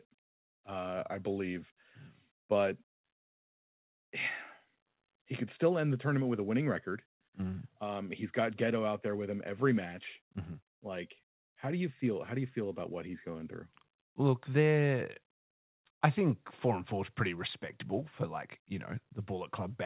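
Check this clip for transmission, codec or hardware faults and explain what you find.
No transmission, codec or hardware faults turn up in this speech recording, which carries no content above 4 kHz, consistent with a narrowband telephone-grade call path such as G.711 mu-law.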